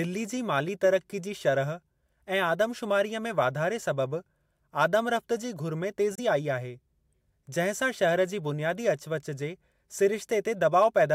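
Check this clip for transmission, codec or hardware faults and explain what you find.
One fault shows up in the speech. From 6.15 to 6.20 s the sound cuts to silence for about 23 ms, then resumes as if it had played on. This is likely a Bluetooth dropout, where a single packet did not reach the headphones in time and was dropped.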